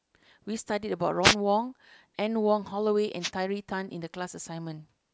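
Wireless microphone noise hits at 1.22–1.35 s and 3.20–3.30 s. Each is a brief static swish over the speech, as the FM radio link fades and receiver noise surges.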